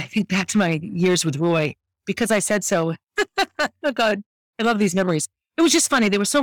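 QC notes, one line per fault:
Throughout: hard clipping. The speech is driven about 7 dB past what the stage can pass, so the loudest peaks get sliced flat. Only a few percent of the samples actually hit the ceiling, which is why it's not a constant fuzz. You get a gritty crackle riding on the louder syllables instead. Those squared-off tops throw extra harmonics way up the spectrum, and that's the harsh edge you hear on the peaks.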